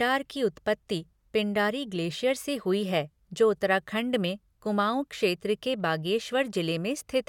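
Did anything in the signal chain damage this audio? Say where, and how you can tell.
No, nothing along the chain seems to have damaged this speech recording, and I can't hear anything that points to a problem at any stage.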